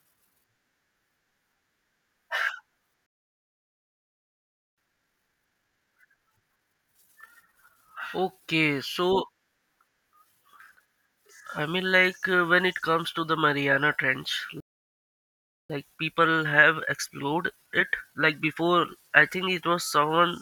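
A speech recording with two playback stalls, each followed by time-compressed catch-up. The speech cuts off mid-flow from 3.06 to 4.78 s (about 1.7 s) and again from 14.60 to 15.70 s (about 1.1 s). Both gaps likely come from the player running dry or its thread being blocked. On a waveform each shows as a flat line, and on a spectrogram as a blank vertical band with hard edges. After each gap the player hurries through its backlog: from 4.78 to 7.78 s at 1.5 times normal speed, and from 15.70 to 18.70 s, starting with "I think it was", at 1.15 times. It does this by splicing out short segments and cross-fading the joins, so pitch stays put but the delivery sounds rushed, most obviously in the first stretch. A spectrogram shows squeezed syllables and compressed formant movements with unchanged harmonic spacing, and the waveform shows tightly packed envelopes.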